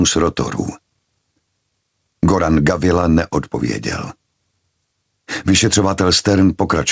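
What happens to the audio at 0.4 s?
At 0.4 s the audio is caught in gain pumping that runs through the whole clip. The level swings by roughly 10 dB. Loud and soft parts end up closer in level, and the sound is squashed. The likely cause is gain set far too high, with a fast limiter clamping it.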